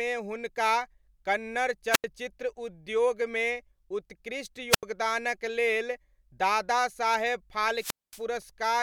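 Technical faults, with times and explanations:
1.91–2.04 s, 4.70–4.83 s and 7.75–8.22 s, wireless microphone squelch dropout: Each event is a short rise of hiss followed by near silence, then the speech returns. The silent gaps last about 86 ms, 84 ms (right after "उद्योगमे उत्कृष्ट") and 225 ms. The analogue FM link from the microphone loses signal strength, so the receiver's noise floor comes up as hiss. When the signal falls below the squelch threshold, the receiver mutes its output until the carrier recovers.
8.42 s, corrupt FLAC frame: A brief, faint error with a peak of about −48 dBFS. The error pattern fits damage that spans two adjacent frames. Flipped bits in the compressed data were decoded without a checksum check, so the decoder's prediction ran on wrong values from the damaged point onward. The result is a tiny burst of incorrect samples. Here the error stays low in level, and decoding is clean again from the next intact frame.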